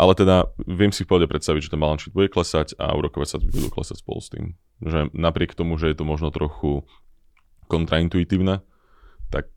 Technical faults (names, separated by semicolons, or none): wireless microphone noise hit